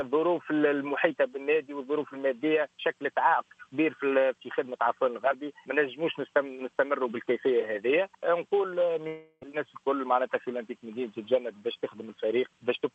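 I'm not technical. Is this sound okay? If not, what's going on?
No. At 9.07 s the sound turns into a fading buzz for about a third of a second, goes briefly silent, then returns at 9.43 s with that stretch missing. This is likely a long network dropout, where the call briefly stopped receiving audio.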